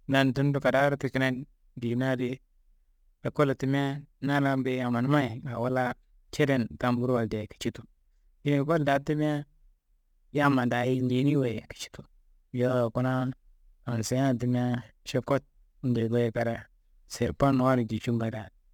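A speech recording carrying a gritty, fizzy edge that never lets up, from start to finish, and it rides on top of the louder and brighter syllables rather than sitting there as steady hiss. That's crude rate conversion: the sound has been moved from 44.1 kHz to 48 kHz by just picking the nearest sample instead of filtering, so the timing errors repeat in a fixed cycle and throw off inharmonic tones, sitting roughly 30 dB under the speech.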